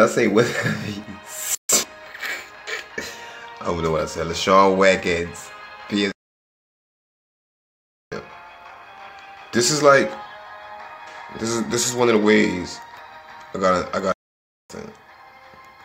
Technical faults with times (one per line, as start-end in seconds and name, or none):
6.12-8.12 playback stall
14.12-14.70 playback stall